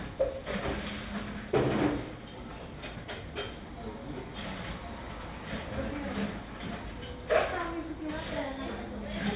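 No technical faults can be heard anywhere in this recording of sounds. It has come over a WebRTC call path, and the sound stops at about 4 kHz, which fits a narrowband codec such as G.711 mu-law.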